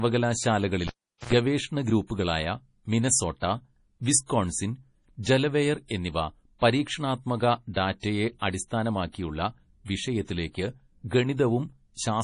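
Throughout, the speech sounds watery and swirly, with nothing above 10.6 kHz. This is heavy damage, likely from MP3 compression at a low bitrate near 32 kbps.

From 0.87 to 1.33 s, the cable is pulled and plugged in. A pop leads into about 410 ms of near silence. An 82 ms burst of 60 Hz mains buzz sounds before a second pop.

Pre-echo occurs at 4.26, 7.74 and 8.00 s. The codec spreads noise ahead of sharp attacks, so a hiss of 34, 26 and 36 ms precedes each, softening it.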